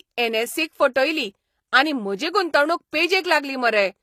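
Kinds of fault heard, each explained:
HE-AAC compression: The treble sounds synthesized rather than recorded, with plainly gritty s sounds, and nothing above 15 kHz. This likely comes from spectral band replication at a bitrate near 24 kbps.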